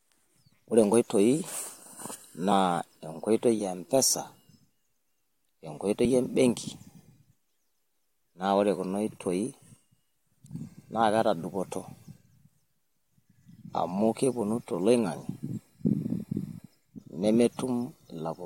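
At 2.51 s and again at 6.04 s the speech is interrupted by a very short blip, lasting only about 10 and 14 milliseconds. Both are damaged data in a compressed stream: part of the encoded file is corrupt at those points, so the decoder misreads the affected frame, loses frame sync, and briefly outputs garbage while it searches for the next valid header before normal decoding resumes.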